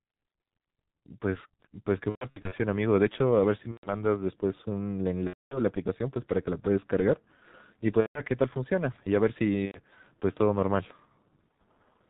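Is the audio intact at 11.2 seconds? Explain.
No, G.723.1 codec damage runs throughout, including 11.2 s: its 30 ms frames, bandwidth capped near 4 kHz and a bitrate consistent with 6.3 kbit/s leave speech muffled, hoarse and smeared.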